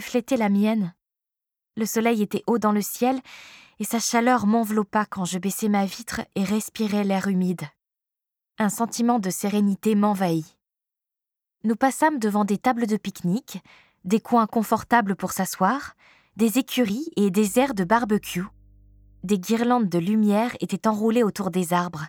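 A ground loop or nearby transformer couples the 50 Hz power line into the signal, adding mains hum, a steady low tone well below the main audio, from 17.47 to 19.32 s.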